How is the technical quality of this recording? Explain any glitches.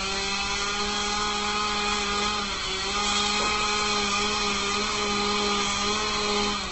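The technical quality is poor. Heavy Opus compression damages the sound from start to finish. Nothing is heard above 8.1 kHz, and tones come across grainy and rough rather than swirling, as they would with MP3. The likely cause is a low-rate Opus encode, one that fits roughly 12 kbps in its music mode, which keeps each band's energy but fills missing detail with folded or noise-like content.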